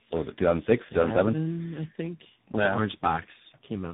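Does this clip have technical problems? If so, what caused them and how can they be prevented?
Yes. Tandem speech coding runs through the whole clip. Three speech codecs in a row, likely CVSD, then a low-rate coder such as AMR-NB near 5.9 kbit/s, then CVSD again, each re-encoding the last one's damage, leave the speech rough, muffled and warbly, with nothing above 3.8 kHz. Prevent it by keeping the call in one codec end to end, using transcoder-free operation.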